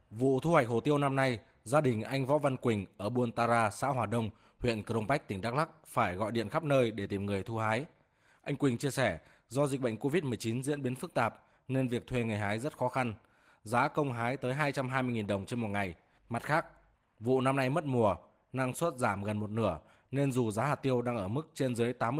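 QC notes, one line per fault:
Nothing to flag here, the speech comes through without any problems worth a note.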